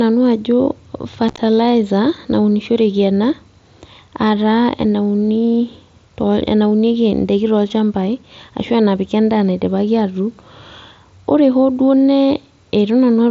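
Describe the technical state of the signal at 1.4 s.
Unconcealed Bluetooth headset packet loss runs from 1.29 to 1.39 s: short voice packets between headset and phone were dropped and replaced with silence or an idle pattern, not patched over. About 60 ms went missing across roughly 105 ms, in gaps no longer than 15 ms, so the speech carried over the mSBC link sounds chopped and crackly, with abrupt edges on each hole.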